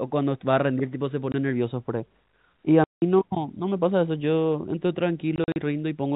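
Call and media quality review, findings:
Packet loss filled with silence, 1.32–1.34 s: single 20 ms dropout, hard edges. Receiver jitter buffer inserting zeros for a missing frame; 20 ms step fits 20 ms packetisation.

2.84–3.02 s: 180 ms hole, a run of consecutive lost packets, abrupt cut and restart.

5.36–5.56 s: scattered gaps totalling 100 ms, longest 40 ms, choppy stutter. No concealment active. Band-limited G.711 A-law narrowband audible throughout.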